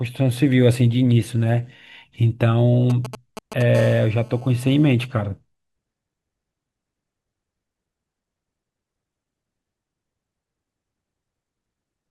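From 2.90 to 3.62 s, GSM signalling bursts break in: a galloping dit-dit-dit of brief 217 Hz buzzes, fairly loud against the speech. They come in groups, not as a continuous tone. From 3.75 to 4.91 s this becomes GSM phone buzz, a steady, raspy 217 Hz drone with many harmonics about 23 dB below the speech. The phone is now transmitting in bursts 217 times a second, as in a call, and the audio circuit rectifies its pulses.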